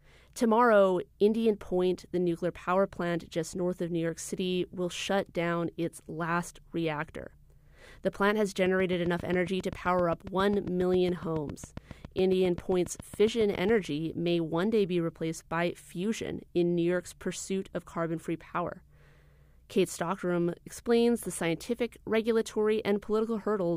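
A pulse source, most likely interference from nearby equipment or a faulty connection, injects a train of clicks from 8.66 s to 13.7 s, starting just after "plant has" and ending before "may one day be". The clicks arrive at a steady 7.4 per second, about forty in all, each much the same shape and peaking around 5 dB above the speech. They are heard as an even, mechanical ticking laid over the talker, and carry on through the pauses.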